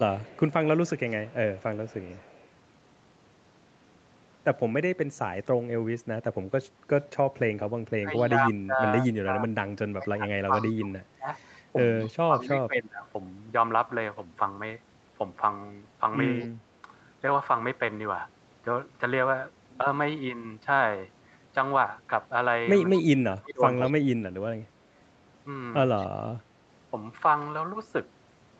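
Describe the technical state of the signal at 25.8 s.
At 25.8 s the speech carries an echo leak, running from 22.94 to 26.07 s: a copy of the voice returns about 214 ms late, roughly 15 dB down, likely from a loudspeaker-fed canceller letting residue through. Unlike room reverberation, it is a distinct repeat rather than a smooth decay.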